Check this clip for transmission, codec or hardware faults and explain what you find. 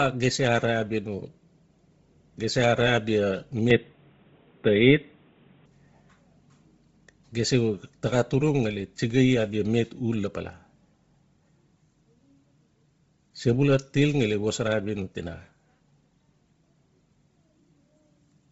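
Two faults are present. The speech is band-limited and grainy throughout, and it briefly drops to a duller input partway in.

Bluetooth LC3 compression, throughout: nothing above 7.8 kHz, with a breathy, grainy edge from noise-filled upper bands. This is likely heavy coding, consistent with roughly 24 kbps and 7.5 ms frames.

Input switched to a poorer device, 3.70 to 5.66 s: the band narrows to 3.8 kHz and the sound turns boxy, with a small level shift and faint added noise. It was likely a changeover to a weaker microphone or call profile, with no gap at either switch.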